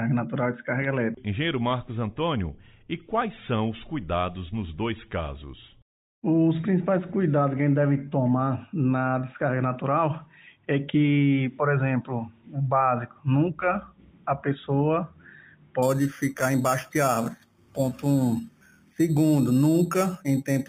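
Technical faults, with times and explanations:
15.83–20.68 s: imaging from sample-and-hold upsampling. From 15.83 s to the end, a bright, metallic fizz rides on top of the sound and rises and falls with its level. Each original sample appears to have been repeated without an interpolation filter, which fits a move from 8 kHz to 48 kHz. The spectrum is mirrored around each multiple of 8 kHz. The lowest copy occupies 4–8 kHz at about 19 dB below the signal and moves opposite to its pitch.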